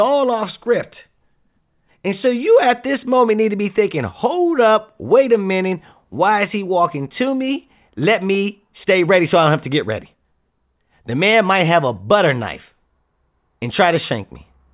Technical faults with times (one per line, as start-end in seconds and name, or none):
none